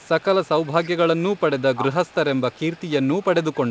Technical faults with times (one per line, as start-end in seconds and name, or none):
0.00-0.89 echo leak
1.11-1.40 speech suppressed in double talk
1.22-1.63 echo leak
1.74-1.94 speech suppressed in double talk
2.06-3.70 echo leak